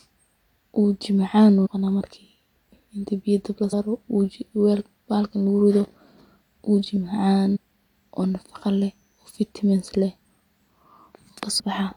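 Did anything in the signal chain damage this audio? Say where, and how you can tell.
Yes, at the codec or storage stage: damaged data in a compressed stream. Short glitches occur at 1.65–1.67 s, 3.72 s (just after "inti biya dab la"), 7.55–7.57 s and 11.59–11.61 s. The decoder misreads corrupted frames, loses sync, then resynchronises at the next frame header.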